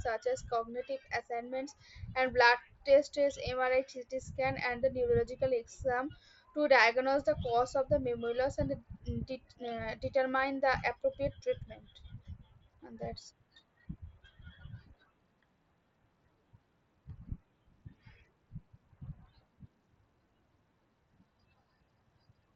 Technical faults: none

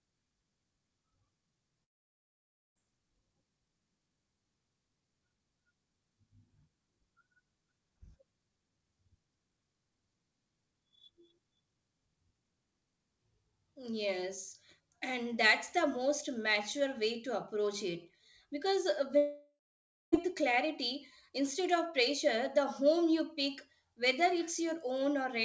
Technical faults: long network dropout

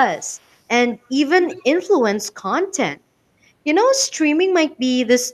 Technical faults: echo leak

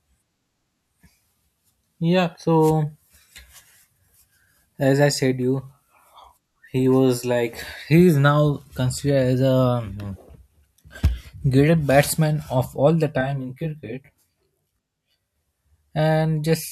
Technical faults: channel delay (comb filtering)

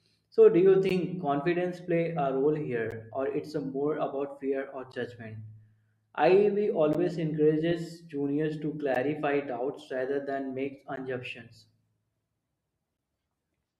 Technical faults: gap between chunks

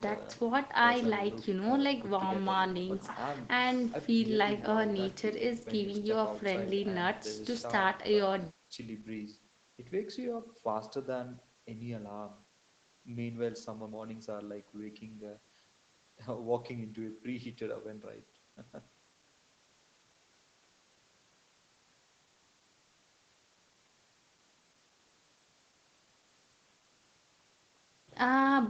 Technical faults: none

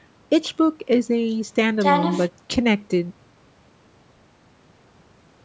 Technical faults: none

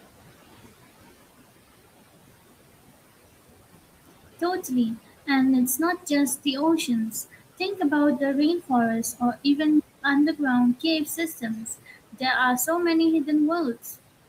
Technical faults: noise suppressor artifacts; playback stall; speech cut by the noise suppressor

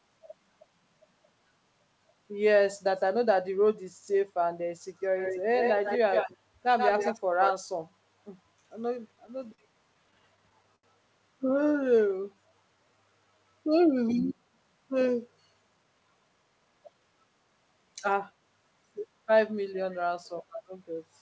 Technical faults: echo leak; repeated stalls (stutter); jitter buffer slow-down; jitter buffer speed-up

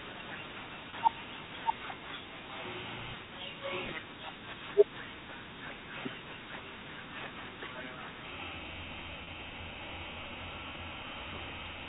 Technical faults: doubled audio track; packet loss with pitch repetition

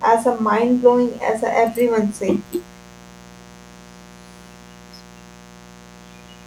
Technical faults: mains buzz

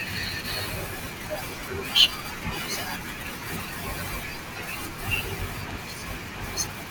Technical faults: loud pop

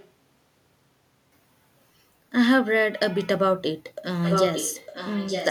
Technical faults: echo leak

